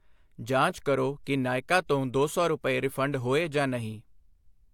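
Speech recording with no technical faults in its signal chain, and no dropouts, distortion or timing errors anywhere in the audio.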